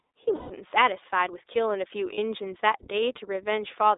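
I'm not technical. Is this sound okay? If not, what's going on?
No. Two related problems can be heard.

The first runs through the whole clip. The speech has passed through the iLBC codec, a phone-style voice compressor used for internet calls. It keeps only a narrow slice of sound, from about 300 Hz up to about 3.7 kHz. So the voice sounds thin, like an old telephone line. The compressor works in small 20 ms chunks, and its damage is plainly audible. The speech has a slightly rough, synthetic edge.

The second problem is lost iLBC frames. Some chunks of the call never arrived, so the decoder filled the holes with a guess. It repeats the last bit of voice with some added noise. The longer gap is from 0.36 to 0.51 s, about 140 ms, which fits seven missing 20 ms chunks. There you hear a held, buzzy sort of vowel instead of real speech. A shorter gap, about 40 ms, comes at 2.14 to 2.19 s. 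The voice recovers almost at once after each gap.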